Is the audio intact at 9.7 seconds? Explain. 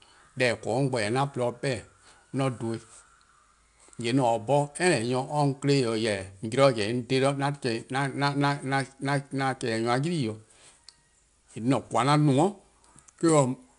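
No. At 9.7 s the speech carries 4-bit ADPCM compression, which runs through the whole clip. Each sample is coded as a coarse 4-bit step from a predicted value, so the error becomes a gritty hiss that rises and falls with the speech level and roughens sharp onsets. Nothing is heard above 10.6 kHz, which fits a rate near 22 kHz. Unlike a perceptual codec's swirly, watery artefacts, this noise is steady, broadband grit.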